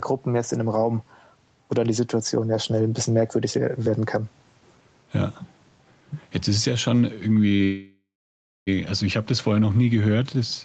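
A speech recording whose level breathes throughout, with the gain swinging by around 5 dB, leaving the delivery squashed. This gain pumping likely comes from the input gain being set far too high, with a fast limiter pulling it down on every peak. Right after "ist es ja schon", at 7.55 s, the last sound is briefly held with a faint buzz or dip for about 40 ms before continuing. That is a short stall from a late packet: the jitter buffer ran dry and the receiver stretched the previous audio until the packet came in. Immediately after, from 7.63 to 8.69 s, a call audio freeze sets in. The held sound fades into roughly 0.6 s of silence, and the audio resumes with "also ich habe das" just over a second late, with nothing skipped. The likely cause is packets held up in transit, emptying the jitter buffer again. Beneath all this, the Opus call path cuts the top end off at 8 kHz.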